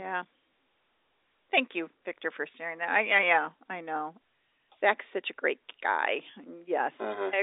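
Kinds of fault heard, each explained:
Nothing here stands out as a fault, just ordinary narrowband telephone-line speech with its usual thin, band-limited character.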